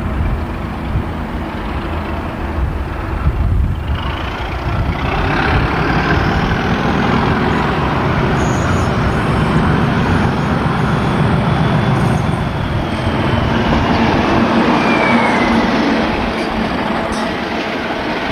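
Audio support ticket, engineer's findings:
Dropped samples, 6.90 s and 16.87 s. Two isolated sharp clicks, each a thin vertical line across the spectrum. Likely a handful of samples skipped in the stream, a fraction of a millisecond at most, so the waveform jumps straight to a later value. Step discontinuity produces the broadband tick. Too brief to remove any audible sound. Check buffer handoff and clock sync between capture and transport.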